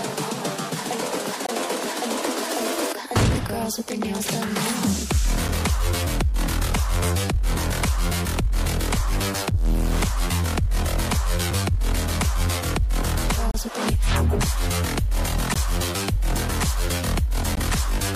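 Hard-edged silent holes at 1.47–1.49, 9.51, 13.51–13.54, 15.54 and 17.55 s are gaps between stream segments: mistimed 2 s segment boundaries leave 7 to 31 ms of inserted silence.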